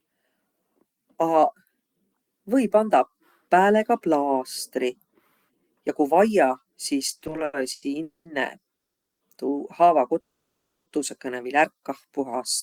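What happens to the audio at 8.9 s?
At 8.9 s the audio stops in a call audio freeze lasting from 8.75 to 9.22 s: roughly half a second of silence. Packets were likely delayed and the jitter buffer ran empty. The sound then resumes where it stopped, with nothing lost but everything after it arriving 450 ms later.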